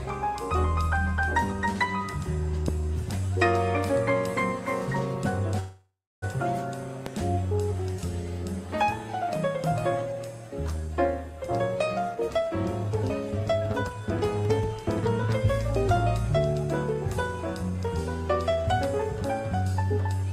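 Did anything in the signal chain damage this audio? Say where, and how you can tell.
Yes. Two loud pops sit on top of the audio, at 2.68 to 2.71 s and 7.06 to 7.09 s. Each is a single sharp click about 15 dB above the surrounding level, and the sound carries on beneath it. On a waveform each is a narrow spike standing well above the envelope. A spectrogram shows a thin vertical line across the whole frequency range. The cause is likely an electrical transient in the analogue wiring or the converter.

From 5.59 to 6.24 s there is a call audio freeze. The last sound is held and smeared into a fading buzz, then drops to roughly 300 ms of near silence. It resumes exactly where it left off, so about 628 ms has been inserted and nothing is lost. A spectrogram shows frozen horizontal bands dying away into a blank stretch. The likely cause is a network stall that drained the receiver's jitter buffer.

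A jitter buffer speed-up runs from 11.46 to 14.83 s at about 112% speed, trimming around 0.4 s. Shorter bursts follow at 17.63 to 17.87 s (114%, about 40 ms removed) and 18.49 to 19.62 s (107%, about 100 ms). Pitch stays the same while the timing is hurried. In a waveform, periodic stretches have repeated cycles cut out, and the spectrogram's harmonic lines stay level but events sit closer together. This is the receiver draining excess buffered delay.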